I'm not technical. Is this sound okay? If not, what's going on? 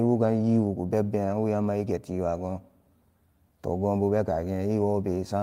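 Yes, this recording is technically sound, with no problems with the signal itself anywhere in it.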